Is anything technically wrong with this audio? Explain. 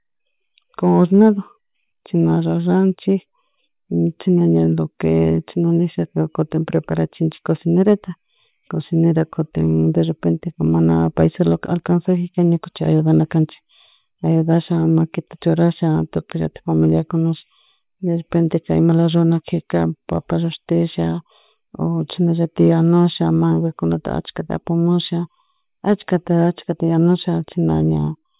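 No, the speech signal shows no technical faults at any point in the recording.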